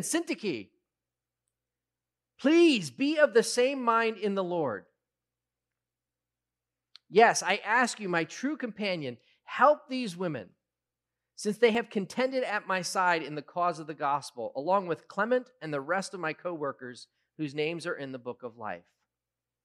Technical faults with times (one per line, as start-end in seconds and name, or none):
11.75 dropped buffer (overrun)